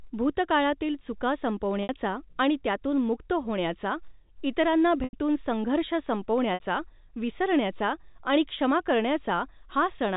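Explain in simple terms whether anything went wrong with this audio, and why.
Three brief dropouts are audible, each caused by packet loss with pitch repetition: parts of the stream never arrived, and the receiver filled each gap by replaying the last voice cycle. That patch sounds like a short, buzzy held tone. The gaps fall at 1.83 to 1.89 s (60 ms), after "भूतकाळातील चुका"; at 5.04 to 5.13 s (90 ms), after "त्यातून मुक्त होण्याचा इतरांना"; and at 6.54 to 6.60 s (60 ms), before "विसरण्याचा आणि क्षमा". The telephone-band sound itself comes from ordinary G.711 telephone coding.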